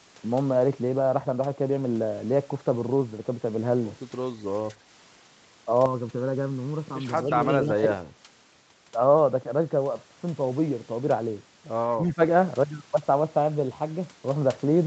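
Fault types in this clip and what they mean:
Channel delay (comb filtering): From 5.86 to 7.22 s one channel lags the other by well under a millisecond, and when the two fold down to mono the shared sound cancels at regularly spaced frequencies. The first notch sits around 700 Hz, with more repeating further up the spectrum, so the speech in that stretch turns hollow and phasey, a bit like it's coming through a tube, then snaps back to normal.
Speech suppressed in double talk: At 7.62 to 7.99 s and again at 11.95 to 12.2 s the talker's level suddenly sags by about 15 dB, chopping into the speech for a fraction of a second each time. The likely cause is the echo canceller hitting a moment where both ends were talking at once, failing to tell the near talker from the loudspeaker echo, and ducking everything to be safe.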